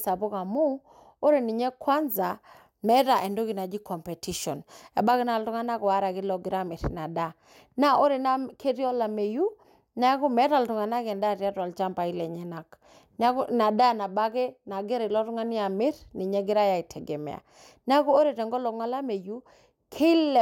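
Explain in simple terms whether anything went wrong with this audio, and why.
From about 2.23 to 5.11 s the speech turns thin, bright and hissy on the s sounds. That's pre-emphasis left on: the treble got boosted, probably with the old CD-style curve, and the matching cut that should undo it never happened.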